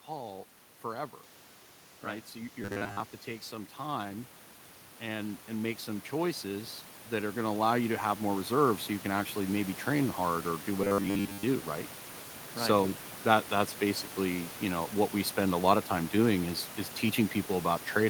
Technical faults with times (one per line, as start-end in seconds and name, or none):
2.04-4.34 automatic gain rising
2.62-3.00 robotic sound from repeated short buffers
4.99-9.83 automatic gain rising
10.82-11.43 robotic sound from repeated short buffers